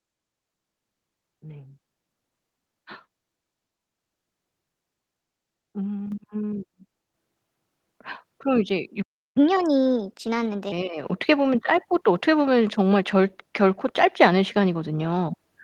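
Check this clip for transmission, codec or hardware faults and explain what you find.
Three kinds of fault are present: repeated microphone volume steps, one playback stall, and a sped-up catch-up right after it.

Microphone volume stepped up at 6.12 s, 7.14 s and 11.04 s, by about 6 dB, 5 dB and 4 dB. Automatic gain control judged the input too quiet and raised the device level in single jumps, so the speech and the background noise get louder together, abruptly.

A playback stall runs from 9.02 s to 9.37 s. The speech cuts out for about 0.34 s and then resumes. The likely cause is the player's buffer running dry or its audio thread being blocked, leaving the output silent until data arrived again.

Catch-up at higher speed follows from 9.37 s to 10.72 s. The player resampled its backlog at 1.25 times normal speed to recover the lost time, so the speech sounds hurried and roughly four semitones higher before snapping back to normal rate and pitch.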